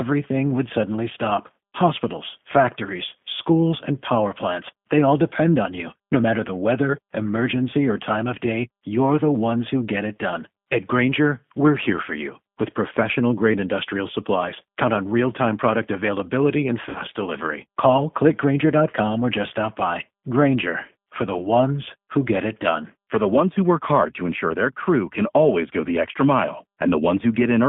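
Throughout, the G.729 codec at 8 kbit/s confines energy to roughly 150 Hz–3.5 kHz, an empty spectrogram above; its sparse pulse model leaves speech plainly rough and synthetic. From 16.89 to 17.01 s, VoIP packet loss concealed by the speech codec: about 60 ms missing, fitting three 20 ms packets, is extrapolated into a decaying buzzy tone or coloured noise, shown as smeared spectral energy and shrinking waveform amplitude.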